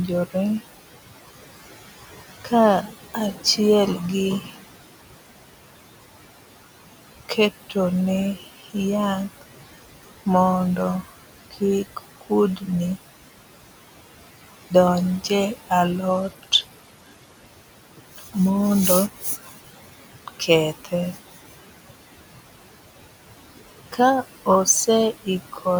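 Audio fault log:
Throughout: noise suppressor artifacts. The room noise, about 14 dB under the speech, gets pushed down about 17 dB between phrases, so the noise sinks between the words and rises under them.
2.44–3.58, 4.41–4.56, 7.29–7.76, 8.36–8.75, 10.03–12.68, 17.97–18.36, 19.13–21.52, 23.32–25.66 s: speech cut by the noise suppressor. Bits of speech get mistaken for noise and turned down, at worst about 15 dB, so they sound swallowed or faint.
16.10–17.47 s: Bluetooth SBC bit pool drop. The treble dulls and grit creeps in, which fits the bit pool halving from 28 to 14, around 108 kbps, until it recovers.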